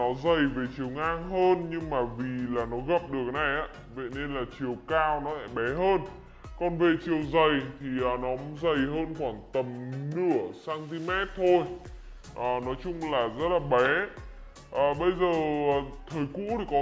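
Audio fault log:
throughout, wrong sample rate: sound runs at 0.726 times speed and about 5.5 semitones low together, which fits 22 kHz audio played at 16 kHz, unlike pitch-shifting alone.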